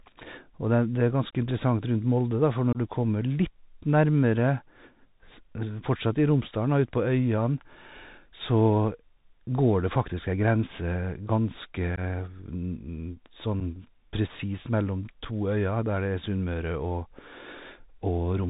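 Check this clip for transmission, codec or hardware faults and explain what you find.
Two faults are present: a narrowband Bluetooth CVSD headset codec throughout, and brief unconcealed Bluetooth headset packet loss at four points.

The CVSD codec affects the whole speech clip. Its one-bit delta coding sends only up or down steps, with an adapting step size. Nothing above 4 kHz survives. S sounds turn scratchy, loud highs distort, and granular hiss sits underneath. This fits a 64 kbit/s CVSD link.

Unconcealed packet loss occurs four times. The first is from 2.73 to 2.77 s, just after "da for", with about 22.5 ms missing. The next is from 11.96 to 11.99 s, with 15 ms gone. Then come 13.60 s and 15.25 s, each 7.5 ms. Lost packets were replaced by silence or an idle pattern, leaving abrupt holes. The speech returns briefly quieter each time.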